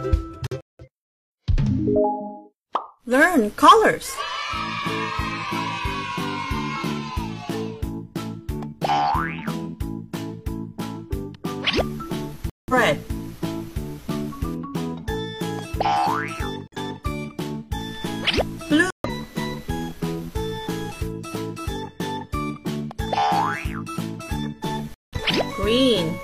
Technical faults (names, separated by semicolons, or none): corrupt frame muted